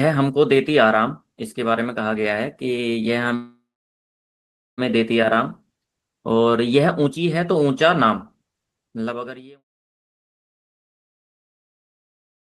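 From 10.00 to 12.37 s, an overfull jitter buffer dropped short pitch periods, roughly 0.7 s, causing a jitter buffer speed-up. Speech runs 129% fast and sounds hurried at unchanged pitch.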